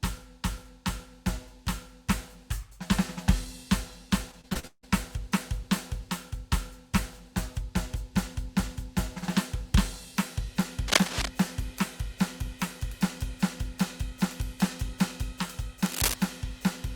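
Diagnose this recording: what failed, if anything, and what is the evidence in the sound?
The network stage failed between 4.31 and 4.85 s with repeated packet loss, giving a robotic sound in the music. Six gaps fall in about half a second, together about 280 ms, the longest 159 ms. The receiver filled each hole by extending the last sound, so about half that stretch is concealed. That gives choppy, robotic repetition rather than clean silences, which sets it apart from a buffer underrun, where the holes would simply drop out.

At 10.88 to 11.28 s and again at 15.86 to 16.14 s, dense, uneven bursts of scratching sit over the music, roughly as loud as the music itself. This is cable scratch noise, likely from the analogue wiring: a worn cable, connector or control being moved, its contact resistance jumping about. It is broadband, irregular rustle lasting a few hundred milliseconds. Digital clicks are single sharp ticks, and clipping follows the loud peaks of the music.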